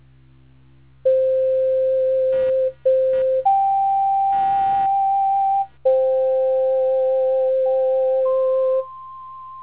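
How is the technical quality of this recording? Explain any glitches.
The quality suffers from one glitch, computer activity noise, heard within a narrowband call path that carries nothing above 4 kHz. From 2.32 to 5.78 s, processor or peripheral load disturbs the shared audio ground, adding a buzzy, chirping pulse near 200 Hz, roughly 25 dB below the sound.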